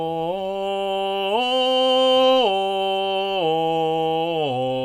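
The clip is music, and nothing is technically wrong with it.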